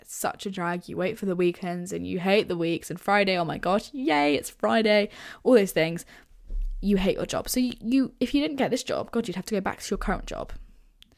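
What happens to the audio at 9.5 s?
At 9.5 s the speech carries on intact, with no dropout, click, distortion or other fault at that point.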